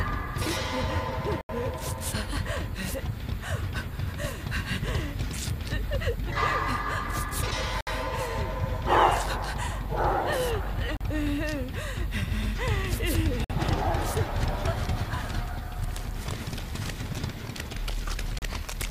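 The audio drops abruptly to silence five times, at 1.41 s (about 81 ms), 7.81 s (62 ms), 10.97 s (40 ms), 13.44 s (53 ms) and 18.39 s (35 ms), each gap a clean hole rather than a fade. These gaps are likely Bluetooth stalls: radio interference delays packets, the headphones' buffer empties, and playback halts until the retransmitted audio arrives.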